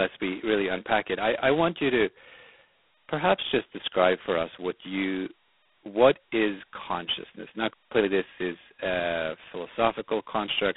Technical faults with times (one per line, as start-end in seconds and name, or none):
0.00-10.76 G.726 ADPCM
7.73-7.92 playback stall
7.92-8.08 time-compressed catch-up